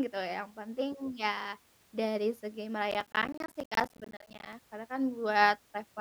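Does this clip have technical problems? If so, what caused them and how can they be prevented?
Yes: right after "dari segi", from 2.91 to 4.53 s, there's processor overload crackle, with roughly 10 ms blocks repeatedly dropping to silence as the CPU misses deadline after deadline. To prevent it, cut background load or use a larger buffer.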